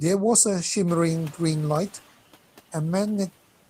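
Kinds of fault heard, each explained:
Noise suppressor catching up: The room noise jumps around 1 second, and the suppressor's estimate lags. Noise passes through with less reduction at first, then sinks about 8 dB over 1.15 seconds.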